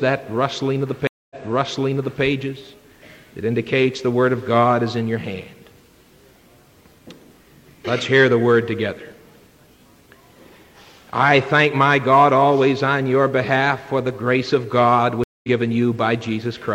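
The audio suffers two stream reconnects. At 1.07 s it goes silent for 0.23 s, then resumes 0.93 s earlier, so the passage repeats up to about 2.23 s, as when a server resends a burst. At 15.24 s a 0.2 s gap returns about a fifth of a second later, skipping material. Unlike a simple dropout, each gap moves the playback position, because a fresh decoder restarts mid-stream after the connection breaks.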